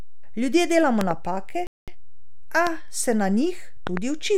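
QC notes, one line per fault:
throughout, DC offset: The whole waveform sits shifted off zero by a constant amount. Unlike mains hum or low rumble, nothing is audible. It shows only as steady energy at 0 Hz at the bottom of the spectrum, and it uses up headroom before clipping.
1.01–1.13, 2.67–2.69, 3.87–3.99, loud pop: Sharp impulses, roughly 15 dB above the speech. The first and last are double pops and the middle one is single. The speech carries on underneath without a gap, which separates these from dropouts or clicks at edits. They are likely voltage steps from static, a switch or a driver glitch.
1.67–1.88, playback stall: The speech stops mid-flow and the output goes silent for about 208 ms, likely because the player ran out of buffered data or its thread was blocked. It then resumes where it left off, so nothing is skipped, which separates it from a dropout that loses audio.
1.88–2.28, time-compressed catch-up: Right after the stall the speech is hurried to about 1.5 times normal speed while its pitch stays the same. 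Small pieces are cut out and cross-faded to clear the backlog, which separates this from resampling, where the pitch would rise too.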